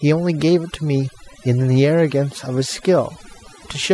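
Speech runs through the whole clip with overdone noise removal applied from start to finish. A noise reducer set too aggressively has pulled individual frequency bands down to almost nothing wherever they sat close to its noise estimate, taking the softer parts of the speech along with the noise. Gaps between phrases drop to near silence sprinkled with twinkling specks. On a spectrogram the background shows as scattered isolated dots, and speech harmonics look patchy with holes.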